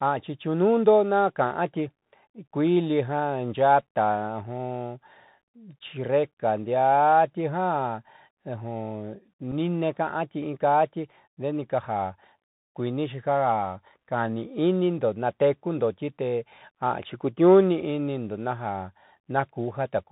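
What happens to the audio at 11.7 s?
At 11.7 s the speech is carrying the Bluetooth CVSD headset codec, which is present throughout the clip rather than starting there. CVSD sends a single up-or-down bit per sample and adapts its step size, at a rate consistent with 64 kbps, and passes nothing above 4 kHz. The result is plainly audible: a narrowband, muffled tone, a grainy hiss under the speech, scratchy s sounds, and distortion where loud high-frequency energy outruns the step size.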